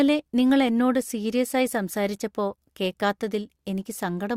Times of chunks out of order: none

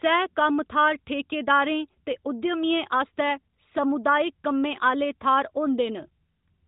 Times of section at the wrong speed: none

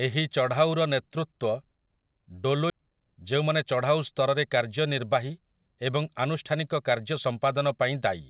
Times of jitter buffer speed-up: 2.73-7.13

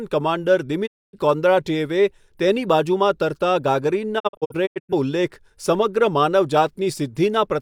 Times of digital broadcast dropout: 0.85-1.18, 4.18-4.93

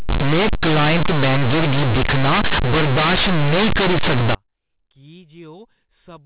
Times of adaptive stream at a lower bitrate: none

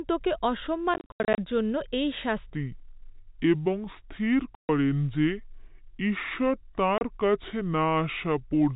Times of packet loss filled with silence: 0.94-1.38, 4.55-4.69, 6.98-7.01

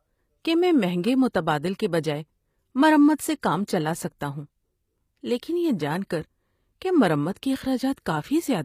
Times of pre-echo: 7.34-7.36, 7.93-7.97

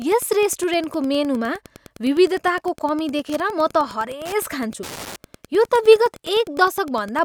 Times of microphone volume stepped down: none

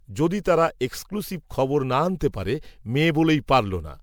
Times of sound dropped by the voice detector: none

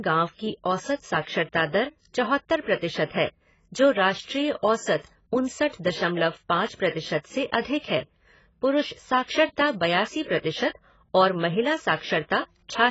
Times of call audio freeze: none

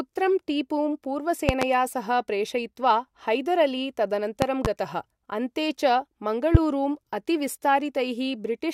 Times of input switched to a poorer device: none

